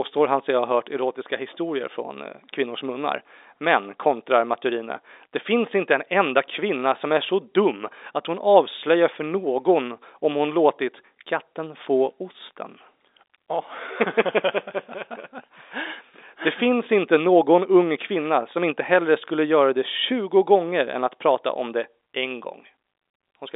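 No technical faults are audible.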